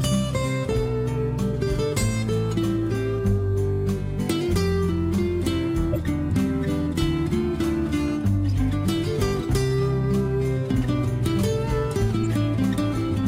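At 5.92 to 5.97 s a corrupt frame was decoded: flipped bits in the compressed data were played out rather than concealed, so misread gains and codes put energy at the wrong frequencies. It lands as a sharp blip peaking around -10 dBFS, spanning what sounds like a couple of frames. At 12.22 to 12.34 s the same fault recurs as a longer, quieter chirp near -20 dBFS, consistent with several consecutive damaged frames.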